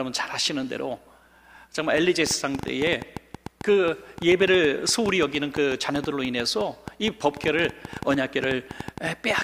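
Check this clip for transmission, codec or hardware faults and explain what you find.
There's one fault here, a train of clicks running from 1.98 s to 9.39 s. About 50 similar pulses arrive at roughly 7.7 per second, unevenly spaced, peaking about 5 dB above the sound. It's likely interference from nearby equipment or a faulty connection or power supply, and it comes through as popping even in the pauses.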